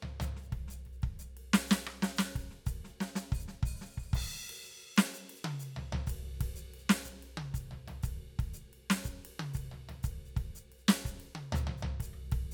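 At 5.75 s a single sharp click cuts through the music. It is likely dropped samples, a fraction of a millisecond lost, so the waveform jumps abruptly.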